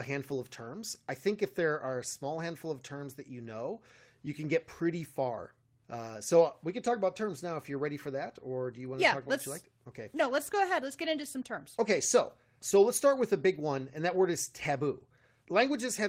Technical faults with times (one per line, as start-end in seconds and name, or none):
none